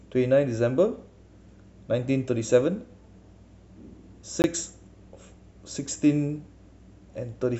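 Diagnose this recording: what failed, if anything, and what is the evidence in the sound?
At 4.42 s the speech drops out for about 20 ms, a hard cut to total silence, heard as a brief tick-like hole rather than a fade. That is a block of digital silence, a driver or buffer failure. The output buffer was likely not filled in time, so that span was zeroed and the waveform jumps abruptly to silence and back.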